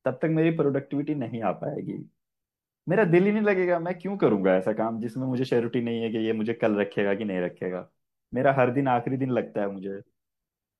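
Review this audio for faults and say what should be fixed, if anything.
No faults can be heard anywhere in the speech recording. Nothing needs fixing.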